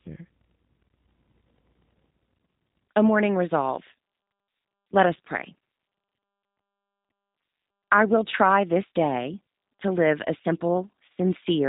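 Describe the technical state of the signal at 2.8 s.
At 2.8 s the speech carries G.729 codec damage, present through the whole clip rather than at this moment alone. The codec rebuilds each 10 ms frame from a vocal tract filter, a pitch predictor and a few excitation pulses, so the voice sounds plainly rough and slightly synthetic, with nothing above 3.8 kHz, which fits an 8 kbit/s G.729A stream. Unlike a simple low-pass filter, it also makes the voiced sound buzzy and grainy.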